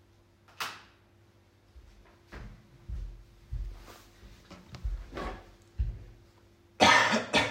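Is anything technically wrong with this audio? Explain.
No, nothing is technically wrong with this audio.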